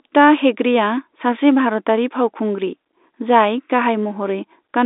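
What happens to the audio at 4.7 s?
At 4.7 s the speech carries on intact, with only the narrow, telephone-band character of G.711 coding that runs through the whole clip, nothing above about 3.8 kHz, and no dropout, click or distortion at that point.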